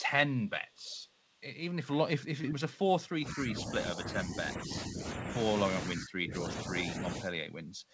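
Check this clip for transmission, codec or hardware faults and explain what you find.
The speech shows three kinds of fault: echo leak, short concealed packet loss and speech suppressed in double talk. Nothing sits above 8 kHz, which fits a G.722 wideband call path.

Echo leak is heard from 0.69 to 0.91 s and again from 1.14 to 1.18 s. It is likely the far end's loudspeaker feeding its microphone past an incomplete echo canceller. The result is a faint copy of the speech trailing by 468 ms, at about 35 dB and then about 40 dB below the speech. On a spectrogram it appears as weak, displaced duplicates of earlier harmonic patterns.

Short concealed packet loss occurs from 2.42 to 2.46 s. About 20 ms of audio failed to arrive in time, and the decoder extrapolated the preceding sound to fill 18 ms before crossfading back. It is heard as a brief smear or wobble.

Speech suppressed in double talk occurs from 3.18 to 4.40 s, 4.56 to 5.38 s, 5.91 to 6.75 s and 6.99 to 7.29 s. 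These dips were likely caused by an echo canceller that attenuated the near talker while the other side spoke. The drops are roughly 10 dB in the first two stretches, deep (about 30 dB) in the third and slight in the fourth. The waveform envelope sags visibly, and spectrogram energy thins in those spans.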